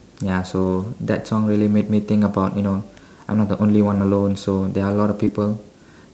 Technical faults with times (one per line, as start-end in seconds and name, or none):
0.63-0.85 lost packet rebuilt from error correction
3.87-4.01 lost packet rebuilt from error correction
5.25-5.29 short concealed packet loss
5.27-5.29 lost packet rebuilt from error correction